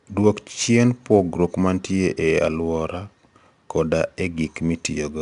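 Throughout, 4-bit ADPCM compression adds gritty, level-following hiss to the speech, with nothing above 10.7 kHz, fitting about 89 kbps. The spectrogram shows a noise haze tracking loudness under a sharp ceiling.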